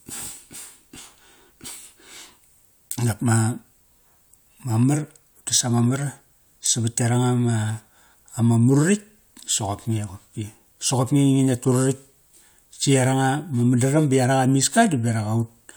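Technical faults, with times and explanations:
No technical faults can be heard in this speech clip.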